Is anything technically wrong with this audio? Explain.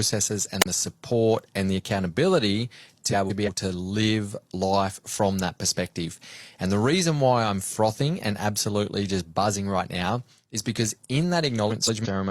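Yes. There are two kinds of fault.

A wireless microphone squelch dropout occurs at 0.60 to 0.66 s, just before "the support and the". The radio signal weakens and the receiver's squelch cuts the output. A brief lift of hiss comes first. Then there is a near-silent hole of about 35 ms. The speech resumes at "the support and the".

Frames out of order appear twice. The first is at 3.12 to 3.49 s, between "support and the accountability" and "to live life from". The second is at 11.70 to 12.07 s, after "now is because in". Each time, two adjacent blocks of about 171 ms, which fits four-frame blocks, were decoded in swapped order. The stretch plays with its halves exchanged. It sounds like a garbled flutter. No time is lost.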